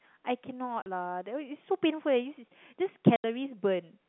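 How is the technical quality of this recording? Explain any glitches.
The recording has two dropouts, both caused by packet loss filled with silence. The first runs from 0.82 to 0.86 s (40 ms) and the second from 3.16 to 3.24 s (80 ms). Missing packets were replaced with silence, so the speech cuts to dead air with abrupt edges. The gap lengths suggest 20 ms packets. Underneath, the narrow telephone band of the G.711 coding is audible.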